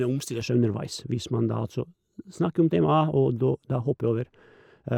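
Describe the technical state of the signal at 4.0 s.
At 4.0 s the speech sounds dull and muffled, its treble rolled away. This is de-emphasis applied wrongly, running from 0.41 s to the end at 4.98 s: a treble cut applied where no pre-emphasis existed or applied twice, leaving 10 kHz about 11 dB below 1 kHz.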